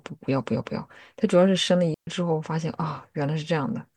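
A digital wireless dropout hits this speech clip from 1.94 to 2.07 s: the receiver lost too much data and muted for about 130 ms, leaving a clean, noiseless hole.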